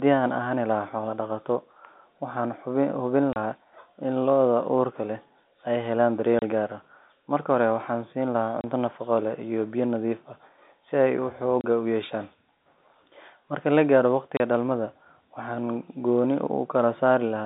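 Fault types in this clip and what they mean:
packet loss filled with silence: five 30 ms holes, each fitting one lost packet, cut the speech; the waveform drops to near silence, the spectrogram shows vertical blank strips.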